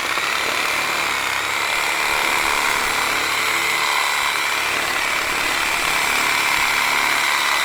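Adaptive stream at a lower bitrate, from 2.60 s to the end at 7.64 s, in this recording of everyday sounds. The quality changes abruptly with no gap as playback switches to a lower-rate version, which fits Opus stepping from 64 to 24 kbit/s. Coding artefacts rise, while content still reaches about 20.3 kHz.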